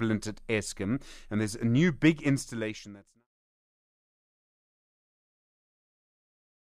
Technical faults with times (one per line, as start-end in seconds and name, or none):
none